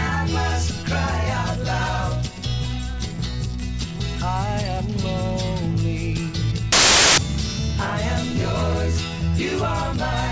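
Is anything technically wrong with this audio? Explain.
Yes, there's one problem. From 6.72 to 7.18 s you get file tags played as audio: the embedded cover picture's compressed bytes are being read as samples, so for roughly half a second it's a hard-edged, very loud burst of white-noise static.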